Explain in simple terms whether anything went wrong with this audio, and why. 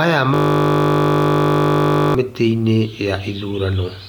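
A system hang loop runs from 0.34 to 2.15 seconds. For almost two seconds, the computer stalled while the sound hardware kept replaying the same tiny stretch of audio, only 20 milliseconds long, again and again. Because each repeat is so short, it comes back 50 times a second, so instead of a stutter you hear a steady buzz in place of the speech until the system recovers.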